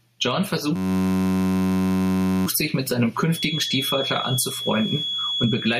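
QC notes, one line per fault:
throughout, gain pumping: The level swings by roughly 10 dB. Loud and quiet passages sit unnaturally close together. This likely comes from the input gain being set far too high, with a fast limiter or compressor pulling it back down on every peak.
0.76–2.46 s, system hang loop: A 10.67 ms slice of audio repeats exactly, over a hundred times in a row, and is heard as a steady buzz at 93.8 Hz. The loop length fits a 512-sample buffer. The driver or system froze while the hardware kept replaying the same ring buffer. Normal audio returns at "sich mit seinem".
3.26–5.80 s, feedback whistle: Right after "sich mit seinem", a thin steady tone at 3.4 kHz comes in about 10 dB below the signal, swells and fades slowly in level and lasts to the end. This is likely a loudspeaker-to-microphone path sitting just at the edge of feedback, where one frequency rings on without running away.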